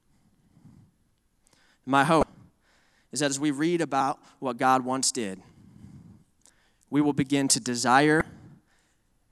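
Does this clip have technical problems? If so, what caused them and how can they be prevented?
Yes. There is damaged data in a compressed stream: some bytes in the encoded audio were corrupted, so the decoder misread those frames, lost sync and searched for the next valid frame header. Each event is heard as a brief glitch, about 34 ms long, at 2.20–2.23 s and again at 8.18–8.21 s, just after "we will begin to". To prevent this, move and store the file over checksummed, error-protected transfers, and verify its integrity before playback.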